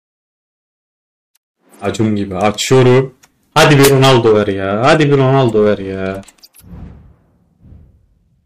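Hard clipping shows up three times, and it gets worse each time. From 1.87 to 2.06 s the peaks are pushed about 4 dB past what the stage can pass, so you just get a bit of crackle on the tops. From 2.43 to 3.00 s it's about 10 dB over. From 3.57 to 5.74 s it's about 20 dB over, and the harmonics from those squared-off tops turn every loud moment into harsh fuzz.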